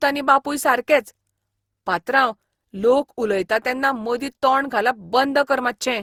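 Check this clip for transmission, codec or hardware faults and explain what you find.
One codec fault runs through the whole clip. Throughout, the speech sounds swirly, hollow and smeared, with blurred consonant onsets, most likely generation loss from roughly ten successive Opus encodes, each requantising on a shifted frame grid.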